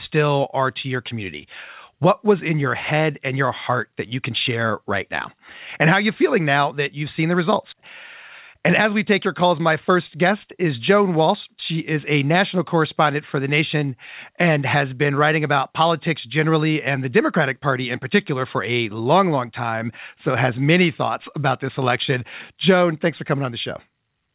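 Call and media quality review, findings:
Nothing stood out on listening to the call audio, which comes through the G.711 A-law path with its expected band limit at 4 kHz.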